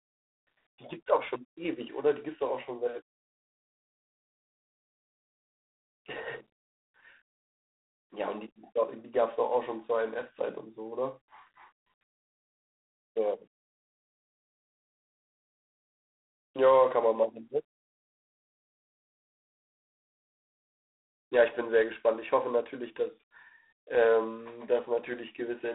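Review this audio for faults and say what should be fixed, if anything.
G.726 ADPCM throughout: rasping hiss tracking the speech level, fitting 24 kbit/s coding; spectrogram shows grainy noise within the band and nothing above 3.8 kHz. Prevent it by carrying the audio over a wideband or 32 kbit/s-or-higher path.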